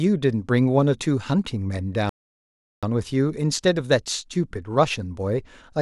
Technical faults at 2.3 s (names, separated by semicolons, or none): playback stall